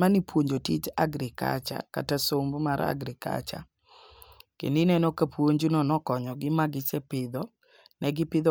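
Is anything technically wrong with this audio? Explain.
No, nothing is technically wrong with this audio.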